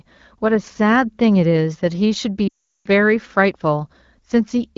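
From 2.48 to 2.87 s the speech drops to near silence within two frames, well before the gap ends, returning briefly thin and rough at 2.87 s. These are lost AMR speech frames: a roughly 0.4 s burst of radio errors, which fits about 19 consecutive 20 ms frames. The AMR-WB decoder, running at 12.65 kbit/s, repeated its last good pitch and vocal tract settings with shrinking gain, fading quickly as wideband concealment does.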